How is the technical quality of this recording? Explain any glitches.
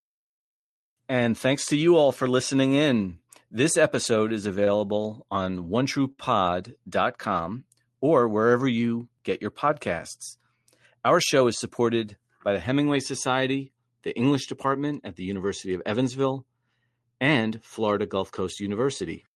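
The recording has two brief timing glitches from network delivery, heard over a speech signal carried through an Opus call codec whose top end stops near 12 kHz.

At 6.12 to 6.20 s there is a short stall from a late packet. A packet arrived after it was due, so the jitter buffer emptied and the receiver held the last sound for about 59 ms until the packet came in. Playback then resumed from the same point. That held sound, with a faint buzz or dip, is what you hear. Nothing is skipped, which separates this from a lost packet, where audio disappears and the concealment smears over a real gap.

From 11.16 to 11.80 s there is a jitter buffer speed-up. The buffer held more audio than it aims for, so the receiver trimmed short pitch-period pieces repeatedly, roughly 40 ms in all, to catch up. The speech runs at about 105% speed for that stretch and sounds slightly hurried. The pitch stays unchanged, which tells it apart from a resampling or clock speed error, where faster playback would also raise the pitch.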